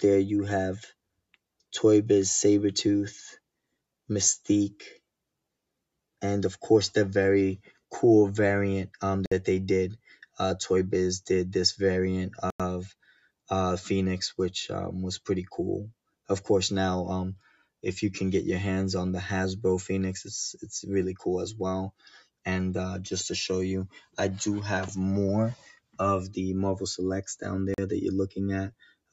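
At 9.26 s and again at 12.50 s the sound drops to complete silence for 57 ms and then 95 ms before resuming. These gaps are likely Bluetooth stalls, where the headphone buffer ran dry while delayed packets were resent. From 12.93 to 13.29 s the sound cut by the noise suppressor sinks by about 20 dB. This is a dip in level, not the dead silence of a stall, and sudden onsets still get through. The same pulling down of steady and decaying sound recurs at 17.39 to 17.83 s (about 14 dB), 21.91 to 22.28 s (about 21 dB), 23.93 to 24.17 s (about 20 dB) and 25.55 to 25.99 s (about 22 dB). A third hard gap of 40 ms at 27.74 s follows the stall pattern. A final suppressor cut of about 22 dB runs from 28.70 s to the end.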